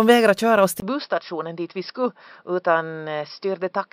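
A speech clip where, from 0.8 s to the end, the sound abruptly turns duller and a few dB quieter after a brief 20 ms gap. Nothing is left above 5.5 kHz, and a faint new noise floor appears, likely an input switched to a poorer device.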